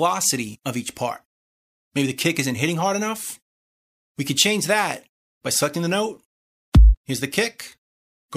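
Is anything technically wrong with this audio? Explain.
Yes. Compressed frames skipped at 0.54 s: about two 26.1 ms frames never decode, so the audio jumps ahead roughly 50 ms, leaving a brief smeared blip instead of a click.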